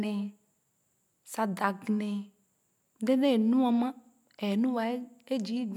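No technical faults can be heard anywhere in the speech recording; the signal stays continuous throughout.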